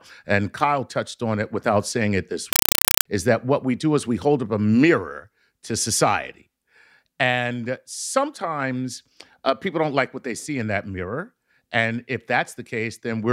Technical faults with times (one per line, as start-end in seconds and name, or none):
2.53-3.05 compressed stream played as audio